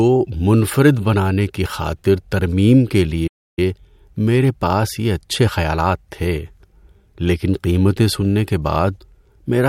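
At 3.27 s the speech cuts out abruptly in mid-flow and the output stays completely silent until 3.59 s, a gap of about 300 ms, before the sound resumes. This is a playback stall. The player was likely starved of data or had its output thread blocked, so nothing reached the output until it recovered and carried on. The gap is long enough to be heard clearly as a break in the speech.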